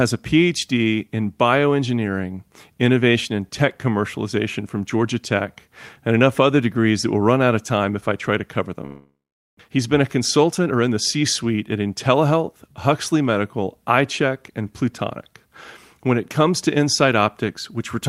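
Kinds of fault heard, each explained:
Long network dropout: audio likely stopped arriving around 8.85 s; the last sound is stretched into a fading buzz or hiss, then about 0.44 s of flat silence on the waveform.
Jitter buffer speed-up: from 9.69 to 10.97 s, short pitch-period slices are cut, so speech runs about 8% faster at unchanged pitch; the spectrogram shows compressed timing, not shifted harmonics.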